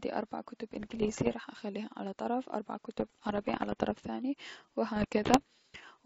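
Three stretches of bit errors on an ADPCM link, from 0.74 to 1.34 s, 2.98 to 3.99 s and 4.96 to 5.42 s, flipping around one percent of bits. Each hit throws off the decoder's step size and predictor, so you hear pops and rough, briefly louder or quieter bursts.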